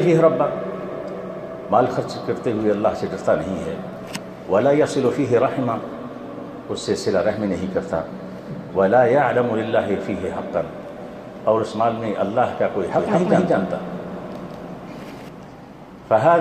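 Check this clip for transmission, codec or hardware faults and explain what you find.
One fault: from 12.99 to 15.29 s, a doubled audio track, with an equally loud copy trailing by about a fifth of a second, abruptly starting and stopping, likely from a second, slower capture path.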